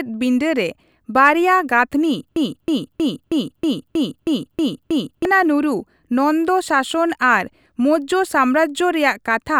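It's a speech clip with a broken-record loop from 2.36 to 5.25 s: a 0.32 s fragment repeats back to back nine times, and whatever should have played there is gone. It's likely the player or stream stalled and kept resending its last buffered chunk.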